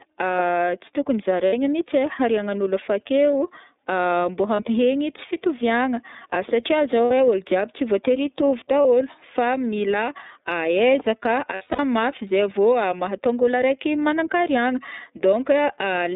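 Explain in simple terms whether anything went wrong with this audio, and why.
Two things went wrong. First, the whole recording passed through the iLBC codec, a phone-call codec. It keeps only a narrow slice of sound, roughly 200 Hz to 3.7 kHz. So the speech sounds thin, like a phone line. The codec damage is plain to hear. The speech has a slightly rough, synthetic edge. That comes from squeezing each 30 ms chunk of sound into a small amount of data.

Second, there are lost iLBC frames. Pieces of the stream never arrived. The decoder filled each hole by repeating the last bit of speech, mixed with some noise. Each gap sounds like a short, held, buzzy vowel. Short gaps came at 1.47–1.54 s, 4.55–4.60 s, 7.05–7.11 s and 8.82–8.86 s. Each lasted 30 or 60 ms. The worst stretch is 11.54–11.80 s. There, several losses are scattered over about a quarter of a second, and the longest run is about 70 ms. 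Each chunk decodes on its own, so the speech recovers almost immediately after every gap.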